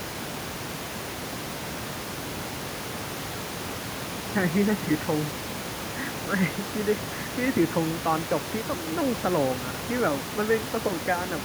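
No technical faults can be heard in this recording; the room's background noise sits about 11 dB below the speech.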